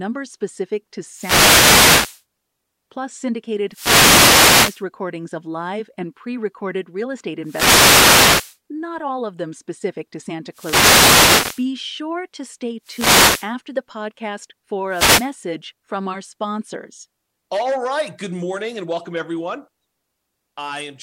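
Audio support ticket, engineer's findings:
Wireless microphone noise hits at 1.09–2.23, 3.69–4.85, 7.43–8.58, 10.51–11.67, 12.83–13.53 and 14.89–15.32 s. Static swishes over speech; analogue FM receiver fading from multipath. Hiss rises rather than the audio going silent, unlike a digital dropout.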